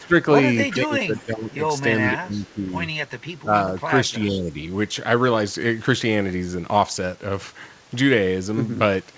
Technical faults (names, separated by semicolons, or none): echo leak; speech suppressed in double talk